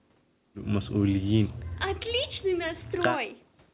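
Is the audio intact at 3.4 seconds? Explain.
Yes, at 3.4 seconds the speech comes through intact, with no dropout, glitch or other fault at that moment.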